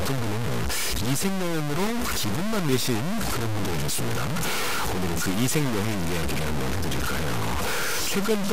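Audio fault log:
Throughout, low bit depth without dither: the speech sounds harsh and grainy, with a gritty distortion that rises and falls with the voice and is roughly as loud as the speech itself. Quiet syllables and tails break up into sputter or drop to silence. The likely cause is truncation to about 3 bits. On a waveform this appears as coarse staircase steps. A spectrogram shows broadband smear that tracks the speech and vanishes in pauses.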